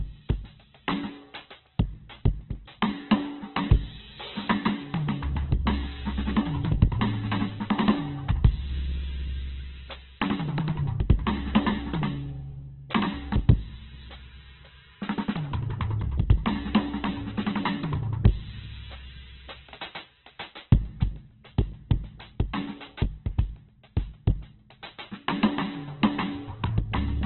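Throughout the music, nothing reaches above 4.2 kHz, and tones sound grainy and rough rather than swirling, pointing to heavy Opus compression, likely at a very low bitrate.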